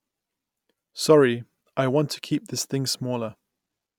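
No technical faults can be heard anywhere in the recording.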